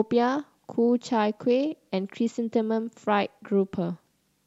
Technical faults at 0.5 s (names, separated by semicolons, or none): none